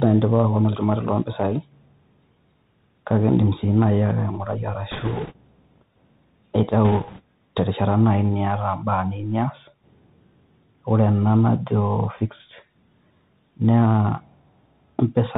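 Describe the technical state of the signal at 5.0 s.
At 5.0 s the sound sits inside a burst of bit errors on a Bluetooth voice link, running from 4.91 to 5.33 s. Flipped bits, around one in twenty, each nudge the decoder's slope only slightly, so there are no sharp clicks, just a rushing, crackly noise. On a spectrogram this shows as a diffuse grey wash filling the band below 4 kHz for that span, with a fuzzier, thickened waveform and no isolated spikes.

Underneath, the whole signal carries the Bluetooth CVSD headset codec, whose damage is plainly audible here. Its one-bit up-or-down coding, which fits a 64 kbps stream, cuts everything above 4 kHz and leaves a granular hiss, with s sounds turned scratchy. A spectrogram shows a hard ceiling at 4 kHz, and the waveform looks stepped and grainy at its peaks.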